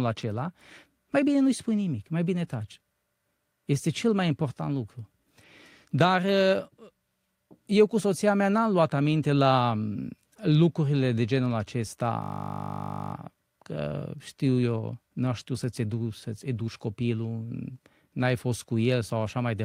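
At 12.22 s the speech gives way to a steady buzz at 50 Hz that lasts until 13.14 s, just before "că știu eu n". This is a system hang loop: the system froze while the sound hardware kept replaying the same 20 ms piece of audio, which points to a 20 ms ring buffer, repeating it over and over. Because the loop is so short, it fuses into a tone. Speech then resumes with essentially nothing missing.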